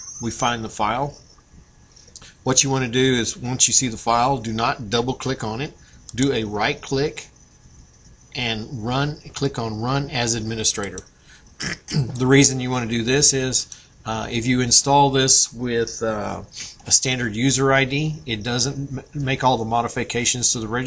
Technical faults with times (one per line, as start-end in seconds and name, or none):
10.50-12.55 resampler restarted on every block